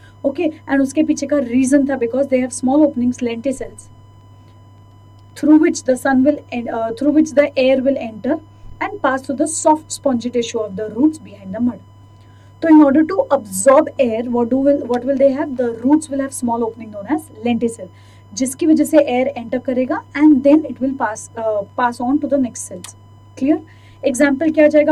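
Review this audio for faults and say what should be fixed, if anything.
There's USB whine running under the whole clip: a steady, fixed-pitch tone at 1 kHz, sitting roughly 40 dB below the sound. That pitch matches the bus's 1 ms frame timing, whose current pulses are leaking into the audio through shared power or ground. Fixing it means breaking that path with a powered hub, a USB isolator, or an interface with its own clean supply.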